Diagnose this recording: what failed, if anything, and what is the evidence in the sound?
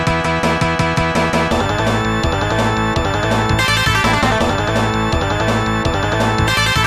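No stage in the chain, from capture through conversion, processing and storage to playback, leaves an audible failure in this recording, and the signal carries through its whole duration without breaks, distortion, level anomalies or timing errors.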